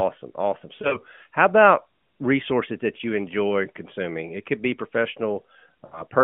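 From 0.76 to 0.97 s, just before "how about resources that", lost AMR speech frames cause brief warbling dips. The decoder repeats its last good pitch and vocal tract settings at falling gain, in runs up to 40 ms. Similar damage recurs at 5.86 to 6.02 s.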